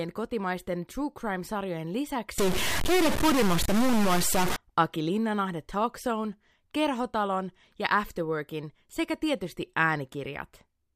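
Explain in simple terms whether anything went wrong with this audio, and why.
Yes, from 2.38 to 4.56 s the speech turns buzzy and gritty, likely a stuck bit, where one digital bit stays fixed and pushes about half the values off by a fairly large step. Unlike clipping, this also fills the pauses with noise.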